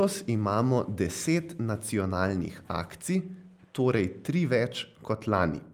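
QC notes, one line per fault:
No faults heard anywhere in this speech clip.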